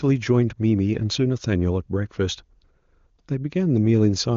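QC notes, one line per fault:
No faults were found in this speech clip. The AMR wideband (HD Voice) coding sounds clear up to its 7 kHz limit, with at most faint codec damage, which fits its top rate of about 23.85 kbit/s.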